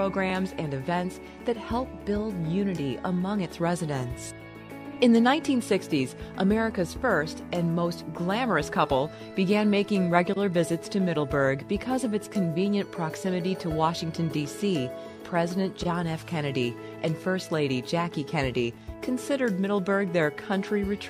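Crude rate conversion appears from 1.67 to 3.93 s: a gritty, inharmonic fizz sits roughly 45 dB below the sound and tracks its loud, bright parts. It suggests a 48 kHz to 44.1 kHz change done by linear interpolation without filtering, leaving unrelated tones.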